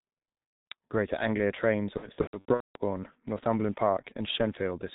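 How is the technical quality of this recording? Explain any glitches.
Technical quality is poor: heavy low-bitrate codec damage throughout, plus two stretches of concealed packet loss.

The G.723.1 codec colours the whole clip. The muffled, hoarse speech, with nothing above 4 kHz and smeared consonants, points to roughly 6 kbit/s. Its long 30 ms frames and slow-updating voice model blur quick articulation.

VoIP packet loss concealed by the speech codec occurs at 0.72 s, where about 180 ms goes missing, and again from 1.97 to 2.81 s, where roughly 540 ms is lost in bursts across 780 ms, the longest run 210 ms. The decoder extends its last pitch and filter with falling gain, producing buzzy, fading tones, and speech stays weak and distorted briefly after audio resumes.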